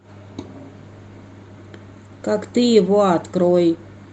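No technical faults can be heard in this speech.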